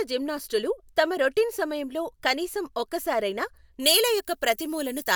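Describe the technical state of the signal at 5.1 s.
Pre-emphasis was left on from 3.80 s to the end: an FM-style 75 µs treble boost was never undone, lifting 10 kHz about 14 dB, so speech sounds thin, bright and sibilant.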